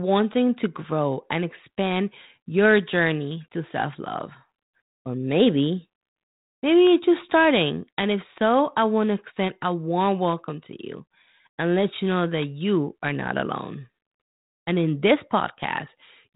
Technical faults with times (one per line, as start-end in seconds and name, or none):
none